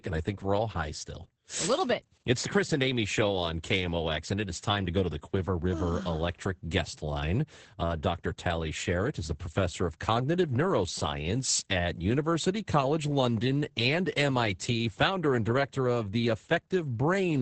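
Heavy Opus voice compression throughout, its SILK coder starved near 10 kbps, leaves nothing above 8.8 kHz and coarse excitation, so the speech sounds muffled, hoarse and slightly robotic.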